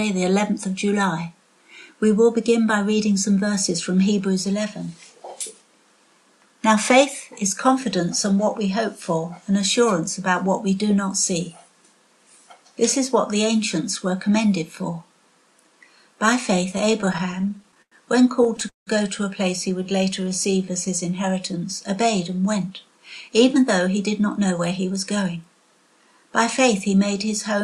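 Repeated stalls (stutter) hit the audio from 16.71 to 17.94 s, with 18 short gaps totalling 262 ms and none longer than 96 ms, and again from 18.44 to 18.89 s, where four gaps fill 212 ms, the longest 178 ms. Packets reached the receiver late, its jitter buffer kept running dry, and it stretched the last sound across each wait. On a spectrogram these show as smeared, frozen bands; the waveform shows repeated copies fading in amplitude. A jitter buffer slow-down follows from 19.83 to 20.66 s. The receiver repeated pitch periods to add 90 ms of reserve, so the audio plays at 90% speed with unchanged pitch. Spectrogram harmonics stay level while events spread wider in time. A jitter buffer speed-up runs from 22.56 to 25.6 s at 107% speed. To shrink an overfull buffer, the receiver cut out short pitch-period pieces, about a fifth of a second in all. The spectrogram shows compressed, slightly choppy transitions with no pitch shift.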